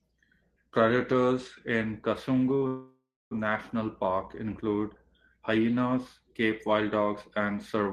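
At 2.67 s the speech stops and the last sound carries on as a fading buzz, falling to silence for about 300 ms, until 3.33 s: a call audio freeze, likely from delayed packets draining the jitter buffer. Speech resumes where it stopped, nothing lost, but 637 ms later.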